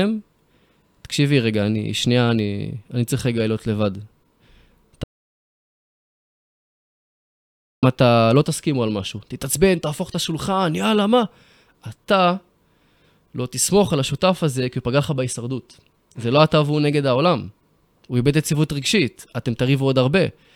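At 5.04 s the speech cuts off abruptly mid-flow. What follows is an audio dropout to silence lasting about 2.79 s, until 7.83 s. The gap is silent. No room tone or hiss remains underneath. The speech then resumes just as suddenly. The likely cause is a lost input, such as a disconnected device or a failed link, while recording carried on writing silence. Whatever was spoken during those seconds is gone.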